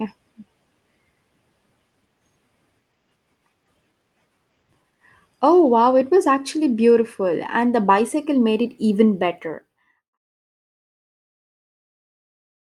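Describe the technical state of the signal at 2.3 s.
At 2.3 s the speech is intact, with no fault present at that moment.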